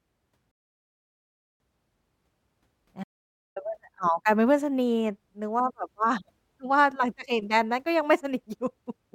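At 0.51 s the speech hits a rebuffering stall: the player ran dry of downloaded audio, went silent, and picked up again at 1.6 s exactly where it left off. Nothing's missing, it just drags the clip out by about 1.09 s.

Then at 3.04 s there's an audio dropout to silence, running to 3.56 s. The gap is silent, no room tone at all, and roughly half a second of speech is simply gone, most likely from the input briefly disconnecting or getting muted.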